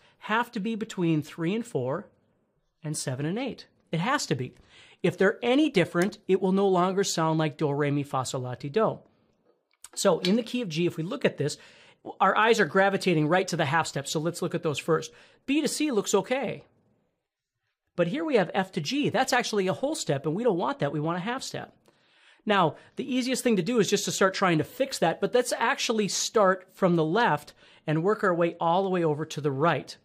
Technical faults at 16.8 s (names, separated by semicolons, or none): none